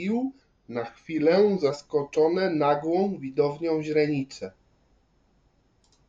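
A drift correction step runs from 0.41 to 1.70 s: the speech slows by 6.35% and drops 114 cents, just over a semitone, then snaps back to normal speed and pitch. The likely cause is clock-matching software briefly changing playback rate to rebalance its buffer.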